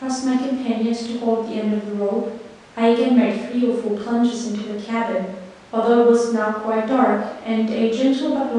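No technical faults can be heard anywhere in this speech recording.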